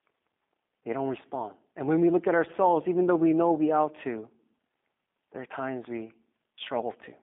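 Speech runs through the G.729 codec for its whole length. A hard ceiling near 3.7 kHz leaves the spectrogram empty above it, and the band spans roughly 200 Hz to 3.6 kHz. The plainly rough, synthetic texture of pulse-rebuilt speech fits 8 kbit/s coding.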